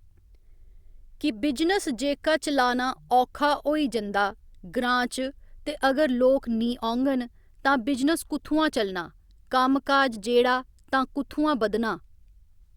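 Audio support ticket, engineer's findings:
No technical faults found on the signal path, with the speech audio arriving intact and no defects to attribute to any component.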